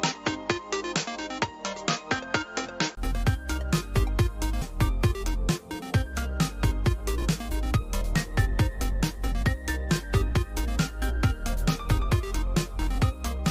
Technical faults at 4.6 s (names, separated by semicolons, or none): skip ahead